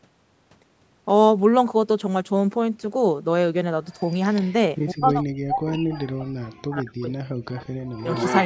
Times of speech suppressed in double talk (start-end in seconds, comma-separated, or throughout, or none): 4.92-7.77